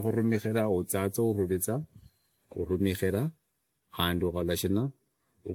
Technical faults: generation loss

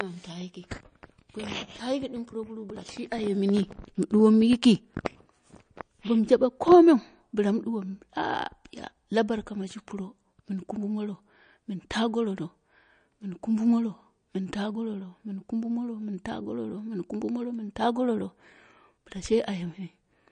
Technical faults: MP3 compression

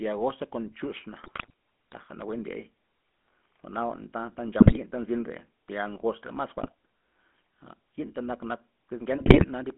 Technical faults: GSM full-rate codec; GSM bit errors

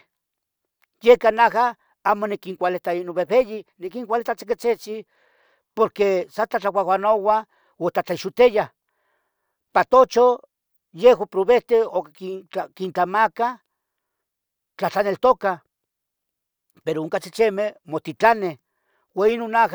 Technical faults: none

